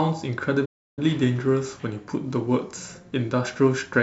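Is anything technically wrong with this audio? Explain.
Yes. There is a playback stall from 0.65 to 0.99 s. The player most likely ran short of buffered data, or its output thread was held up, so nothing reached the output for about 0.32 s until it caught up again. You hear the speech stop abruptly in mid-flow, leaving a hole of dead silence, and then carry on once the output recovers.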